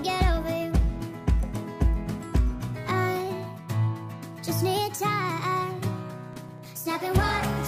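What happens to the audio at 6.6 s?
At 6.6 s the audio is in a burst of processor overload crackle, from 6.33 to 6.66 s: a handful of missed buffer deadlines each drop a few milliseconds to silence, heard as gritty tearing.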